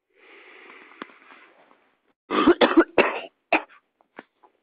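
From 2.11 to 2.31 s, the sound cuts out in a long network dropout. The last sound trails off into near silence, likely from lost packets, and resumes with about 180 ms missing.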